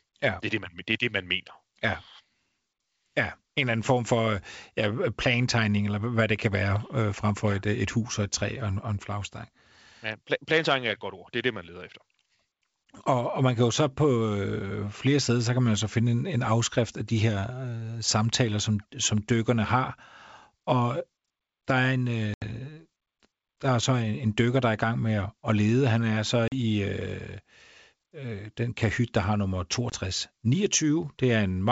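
Packet loss on an ADPCM call cuts hard-edged silent holes into this G.722 speech at 22.34–22.43 s just after "der er en" (80 ms, about four packets), at 26.48–26.53 s (40 ms, about two), and at 29.90–29.95 s after "kahyt der har nummer" (20 ms, about one). The receiving decoder's adaptive predictor and step size drift from the sender's across each gap, so speech resumes with brief, slight distortion that settles within tens of milliseconds.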